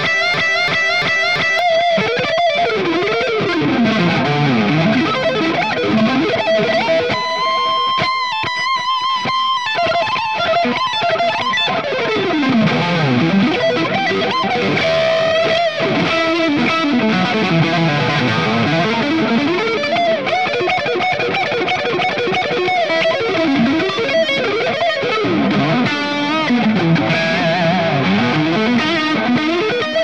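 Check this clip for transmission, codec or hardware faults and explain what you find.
One fault is present. A broken-record loop runs from the start to 1.59 s. A 0.34 s fragment repeats four times, likely from a stalled player resending its last buffer.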